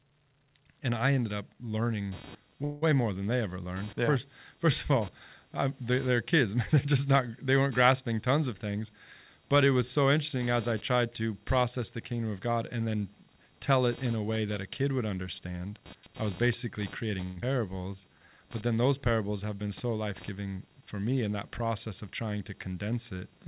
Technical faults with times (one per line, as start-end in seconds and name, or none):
2.12-23.47 computer activity noise
2.64-2.84 call audio freeze
15.39-17.20 jitter buffer speed-up
17.24-17.44 long network dropout
17.89-18.27 jitter buffer slow-down